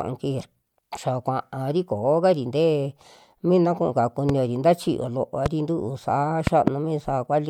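At 0.41 s, damaged data in the compressed stream makes a brief glitch. The decoder lost frame sync and searched for the next frame to recover.

Loud pops follow: one at 4.29 to 4.32 s between "mina kuu kao" and "nta chiyoo", about 10 dB above the speech. A single pop comes at 5.46 to 5.48 s, about 15 dB above, and a double pop at 6.47 to 6.70 s, also about 15 dB above. The speech continues underneath each one. The likely cause is a sudden voltage step, from a switch, plug, static or driver glitch.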